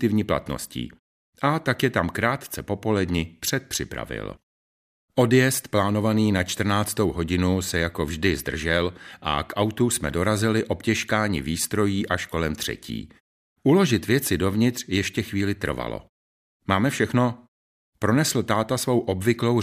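A speech clip with nothing technically wrong with it.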